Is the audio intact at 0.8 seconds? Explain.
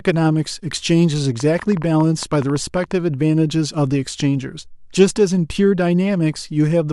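Yes, at 0.8 seconds the speech plays through cleanly, with no dropout, click, distortion or other fault to be heard at that moment.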